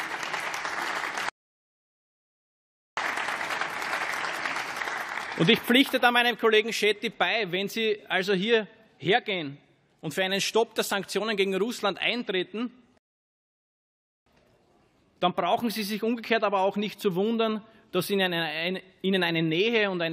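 The audio drops to silence twice, from 1.29 to 2.97 s and again from 12.98 to 14.26 s, then carries on from exactly where it stopped. This is a rebuffering stall: playback ran dry and paused for new data, adding about 1.7 s and 1.3 s without losing any sound.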